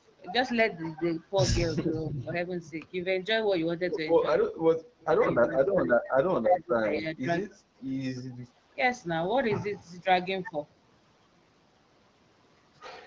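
Between 5.59 and 7.57 s the speech sinks and breaks up three times: a deep drop of roughly 20 dB from 5.59 to 6.12 s, a longer one of similar depth from 6.31 to 7.28 s, and a brief, shallower dip of about 10 dB at 7.5 s. The talker sounds pushed away and chopped. This is likely speech suppressed in double talk, where an echo canceller, with both ends talking at once, mistakes the near talker for loudspeaker echo and turns it down.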